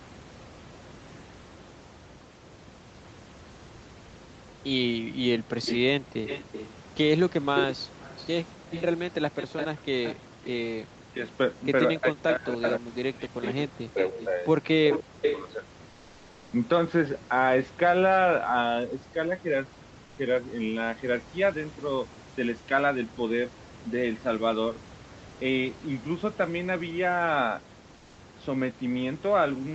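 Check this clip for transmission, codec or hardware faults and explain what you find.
Several call-processing faults are audible: the echo canceller mishandles the opening section, echo gets through twice, the talker is suppressed during overlapping talk, and synthetic noise replaces the background three times.

Background gated by the echo canceller, 4.94 to 6.17 s: while the far end's audio played from the loudspeaker, the canceller turned the microphone down hard. The room sound dips by as much as about 39 dB, in brief dropouts totalling around 0.4 s, then returns.

Echo leak, 5.62 to 11.35 s and 12.31 to 15.52 s: the likely cause is a loudspeaker-side canceller that failed to remove everything its microphone caught and sent the remainder back. A delayed copy of the voice sits only about 5 dB below the direct sound, 286 ms behind in the first stretch and 310 ms in the second.

Speech suppressed in double talk, 10.86 to 15.24 s: with both sides talking at once, the canceller likely couldn't tell its own talker from the loudspeaker echo and attenuated both. 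The voice dips or cuts out in pieces, falling by roughly 40 dB at worst, for about two seconds in total.

Comfort noise in place of the background, at 15.89 to 16.51 s, 20.05 to 20.17 s and 27.97 to 28.17 s: the likely cause is the sender stopping transmission in pauses, which fits Opus discontinuous transmission, while the receiver generates noise to fill the gap. The real room background gives way to a flat, featureless hiss about 2 dB quieter, lasting 0.62 s, 0.12 s and 0.2 s respectively.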